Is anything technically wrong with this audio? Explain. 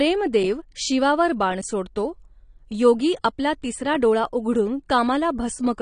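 Yes. Throughout the speech, the sound is dull and smeared, with nothing above 9.7 kHz and a fizzy, warbling texture on sibilants. This is likely AAC compression: the encoder lowers its cut-off and coarsely quantises frequency bands, which fits a low bitrate around 32 kbps.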